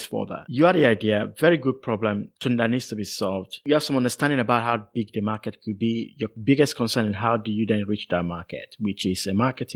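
Nothing technically wrong turns up in this speech clip, which comes through fullband Opus voice compression in its hybrid mode at 24 kbps with no faults to point to.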